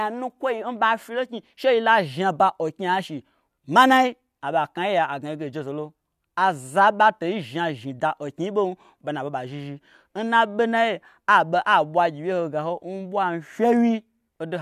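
The speech recording has no audible technical faults anywhere in the signal.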